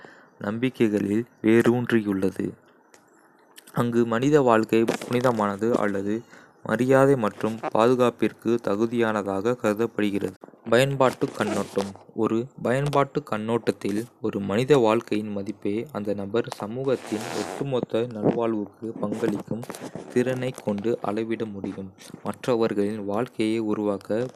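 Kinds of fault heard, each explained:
Nothing to flag here: the speech comes through without any technical fault worth naming.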